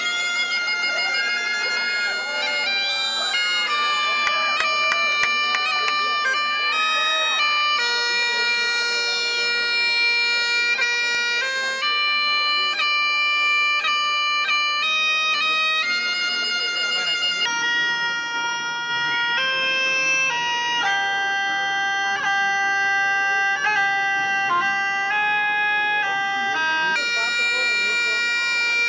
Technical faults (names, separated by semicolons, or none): wrong sample rate